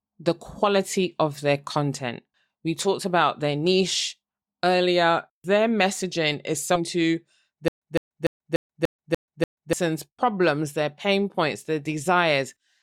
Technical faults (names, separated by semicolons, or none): stream segment skipped; stutter with silent gaps